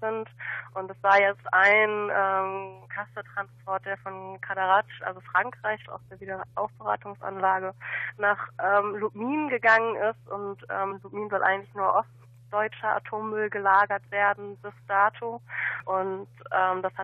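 At 10.90 to 10.92 s a short blip cuts through the sound. This is damaged data in a compressed stream. Some bytes in the encoded file were lost or corrupted. The decoder could not read those frames properly and lost sync. It then searched for the next valid frame header. The bad stretch comes out as a brief glitch. The same fault returns at 15.80 to 15.82 s. Each burst lasts about 20 ms.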